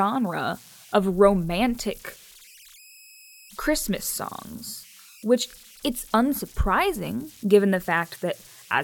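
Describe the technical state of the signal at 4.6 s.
At 4.6 s the speech carries converter idle tones, present throughout the clip. An undithered delta-sigma converter settles into repeating bit patterns on small input. These produce tones around 3 kHz, about 27 dB below the signal, with grainy noise under the sound.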